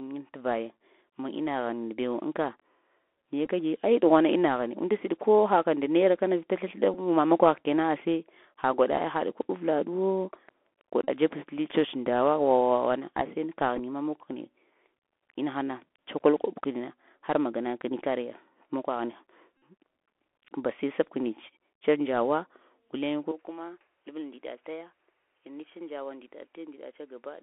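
Speech recorded over a Bluetooth headset link, and the Bluetooth CVSD headset codec is all over it. The band runs from about 250 Hz to 3.5 kHz, so it sounds thin and phone-like from start to finish, which fits a 64 kbps CVSD link. The damage is plainly audible. That one-bit up/down coder can't keep up with loud, bright moments, so sibilants come out scratchy and there's a grainy hiss sitting under the speech the whole way. On top of that there are five spots where the Bluetooth headset packet repeated, meaning voice packets dropped and the chip replayed the previous packet's bits. With a 3.75 ms packet period, those repeats turn into a short buzz around 267 Hz. You get a scattered patch at 3.45 to 3.49 s with runs of about 10 ms at most, a quick one at 6.94 s, about 34 ms of buzz at 11.05 to 11.09 s, a scattered bit at 13.76 to 13.79 s with runs of only a few milliseconds, and the longest, about 49 ms, at 19.59 to 19.62 s. 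Then from 23.32 s to the end there's an input switched to a poorer device. The level drops by about 10 dB, everything above 3.4 kHz is gone so it gets duller and boxier, and a different, faint noise floor appears well below the speech. The change happens with no gap. The likely cause is the system hopping to another mic or the headset's call profile mid-recording.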